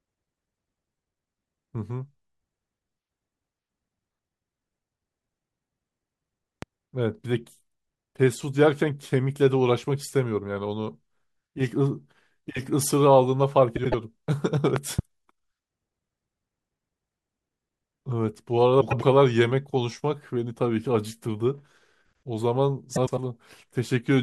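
At 6.62 to 6.65 s a loud pop sits on top of the speech, which carries on underneath. It peaks roughly 10 dB above the surrounding level and is likely caused by a voltage step from a plug, switch or static. On a waveform it is a single tall spike; on a spectrogram, a thin vertical stripe spanning the full frequency range.

From 13.76 to 13.94 s, frames out of order make a short stretch of speech play with its two halves exchanged, each block 78.4 ms long, which fits swaps of three frames apiece. It sounds like a garbled flutter. The spectrogram shows harmonic tracks jumping discontinuously at those seams, while the waveform's envelope steps abruptly. No time is lost.

At 14.76 to 15.01 s a second loud pop arrives as two thumps in quick succession, peaking roughly 15 dB above the signal. The likely cause is again an electrical transient. Two sharp spikes appear in the waveform, and two broadband vertical lines appear in the spectrogram.

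Frames out of order return at 18.81 to 19.03 s and at 22.96 to 23.19 s, this time with 104.5 ms blocks, consistent with four-frame swaps. Each produces the same swapped-halves flutter and visible breaks in the spectral tracks.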